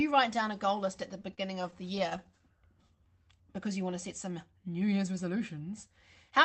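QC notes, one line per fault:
1.13–2.42 s, repeated stalls (stutter): the jitter buffer ran dry thirteen times, each gap up to 38 ms. The last sound was held to fill each gap, so nothing is lost but the speech drags and stutters.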